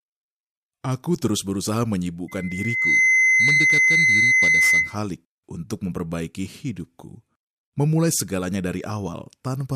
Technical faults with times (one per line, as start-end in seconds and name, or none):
2.28-4.97 loudspeaker feedback squeal